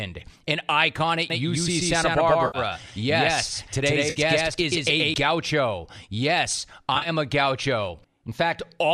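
It's a speech clip with what is likely light low-delay AAC coding throughout. Right after "an icon at", from 1.3 to 5.14 s, there's a doubled audio track: a full-band copy at about the same level sits roughly 150 ms behind, dry and with hard edges, likely a second, slower capture path or a misaligned edit. On top of that, there's AAC frame loss with concealment at 2.47 to 2.58 s (70 ms lost) and 4.1 to 4.2 s (60 ms), each a smeared, phasey patch where the decoder patched over missing frames. A third, patchier loss spreads 70 ms across 6.95 to 7.09 s, with the longest gap around 40 ms.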